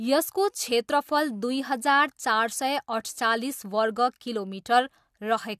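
A short recording of speech, with no technical fault to report. Nothing in the audio points to a problem at any moment.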